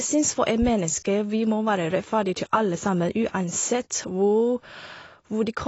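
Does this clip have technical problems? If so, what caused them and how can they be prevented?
Yes. Throughout the speech, nothing is present above 7.6 kHz, so sibilants and breath lose their top end, and codec damage is plainly audible in what remains. The likely cause is AAC compression: AAC-LC splits each frame into frequency lines and spends its bits where a hearing model predicts they matter most, and the hard ceiling at 7.6 kHz points to a low bitrate of about 24 kbps. To prevent it, record and deliver at 96 kbps or more, or keep a lossless copy.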